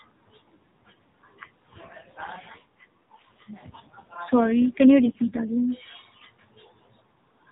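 Speech heard through a narrowband mobile codec, with an AMR rate drop from 1.74 s to 5.62 s: the voice turns rougher and more synthetic, which fits a fall from 12.2 to about 5.9 kbps. Unlike a dropout or a bandwidth switch, there is no gap and the band stays unchanged at the same 4 kHz ceiling. Only the coding detail thins, and it recovers afterwards.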